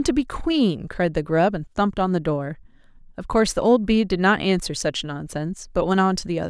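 No technical faults are audible.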